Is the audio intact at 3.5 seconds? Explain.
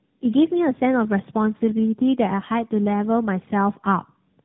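No. At 3.5 seconds, as across the whole clip, you're hearing tandem speech coding. The speech went through two low-rate speech codecs in a row, with a plain telephone-grade link in between. The rough texture fits something like GSM full rate followed by AMR-NB at 12.2 kbit/s. The second coder had to rebuild the first one's already damaged output, so the errors stack up. That gives the grainy, warbly sound, and nothing comes through above about 3.8 kHz, which makes it muffled.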